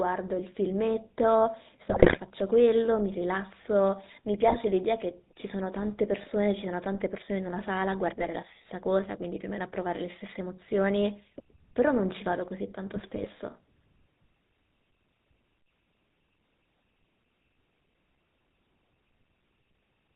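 Speech heard through the GSM full-rate codec throughout: the voice has a buzzy, gravelly roughness, consistent with a 13 kbps full-rate coder rebuilding the vocal tract from a sparse pulse excitation, and nothing reaches above 4 kHz. On a spectrogram the energy stops at a flat ceiling at 4 kHz, and the harmonics below look smeared and coarse rather than cleanly striped. Superimposed are five bursts of GSM bit errors, at 1.9 to 2.19 s, 4.48 to 4.57 s, 6.22 to 6.27 s, 8.21 to 8.29 s and 12.93 to 13.27 s. Here corrupted filter, pitch and gain parameters reach the decoder, so the voice breaks into squawks, pops and gargling. The first and last bursts last longest. On the waveform these show as sudden level spikes or ragged, misshapen stretches. On the spectrogram they show as short vertical blotches of misplaced energy that break the normal formant pattern.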